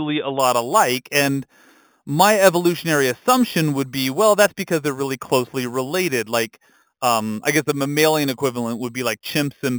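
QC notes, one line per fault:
0.40–9.78 s, imaging from sample-and-hold upsampling: each sample of the speech is simply repeated with no smoothing filter, which points to 8 kHz material raised to 44.1 kHz, so mirrored copies of the spectrum sit above the original band. The first copy fills 4 to 8 kHz at about 13 dB below the signal, a metallic fizz that rises and falls with the speech. It differs from aliasing or hiss in that this band lies above the original band.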